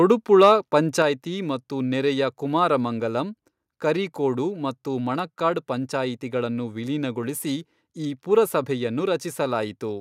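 Speech opens with two bursts of microphone overload, at 0.10 to 0.12 s and again at 0.43 to 0.52 s. The peaks there exceed the converter's ceiling by about 1 dB and about 3 dB respectively, so a few percent of samples are flattened and the loudest syllables take on a crackling, buzzy edge. The cause is likely an input volume set too high. It differs from codec distortion because the harshness appears only on the peaks and disappears once the level falls below full scale. At 1.02 s, just before "ಮತ್ತು ನೆರೆಯ ಕುಮಾರಮಂಗಲಂ ಕರಿಕೋಡು", the microphone volume steps down by about 4 dB, with voice and background noise dropping together in one instant. This points to call software reacting to the clipping and lowering the device gain, and the abrupt step separates it from a gradual fade or from a noise gate, which would act only in the pauses and then reopen.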